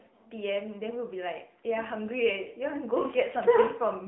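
From start to finish the speech carries AMR narrowband mobile codec damage, plainly audible. Nothing reaches above about 3.8 kHz, and the line band sits between 150 Hz and 3.5 kHz, giving the boxed-in phone sound. What separates it from a simple low-pass filter is the synthetic, buzzy texture: the voice is rebuilt from a vocal-tract model fed sparse pulses every few milliseconds, and the roughness fits a mid-rate mode around 10 kbps.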